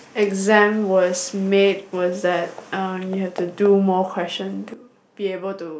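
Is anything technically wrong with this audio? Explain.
Yes. At 4.74 s there's a sudden gain jump: the speech and background noise drop together by about 10 dB and stay down to the end, likely from a gain setting applied instantly without a ramp.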